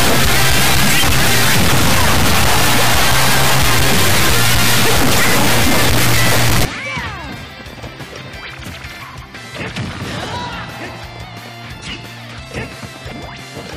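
From the start to 6.65 s the audio suffers an integer read as float fault: samples stored as 32-bit integers are being interpreted as 32-bit floats. Their bit patterns decode to values either vanishingly small or far beyond full scale, so the output slams between silence and the clipping limit. The result is a harsh, extremely loud square-wave buzz that drops to nothing where the sound is quiet. That all-or-nothing behaviour separates it from ordinary overload clipping, which keeps the underlying waveform's shape.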